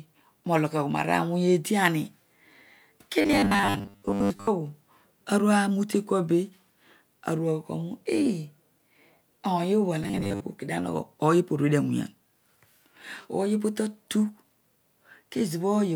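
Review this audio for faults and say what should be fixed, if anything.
Robotic sound from repeated short buffers at 3.21–4.49 s and 10.04–10.42 s: a rigid 100 Hz buzz, likely from a 10 ms block being repeated for most of each stretch. The spectrogram shows evenly spaced harmonic lines, and the waveform shows identical periodic cycles. Fix by enlarging the jitter buffer.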